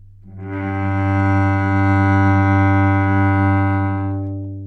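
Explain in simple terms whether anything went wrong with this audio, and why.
Nothing went wrong with this recording: the sound stays intact throughout, with no technical problems to be heard.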